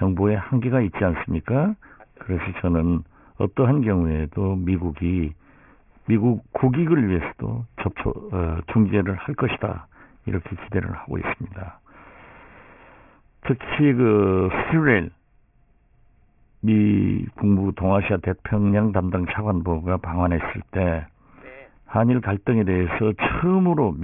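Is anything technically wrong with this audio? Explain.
Yes, aliasing runs throughout the speech. The sample rate was reduced without an anti-aliasing filter, which fits a drop to around 6 kHz, so content above 3 kHz folds back down as false tones, roughly 15 dB under the speech, making sibilants gritty and metallic.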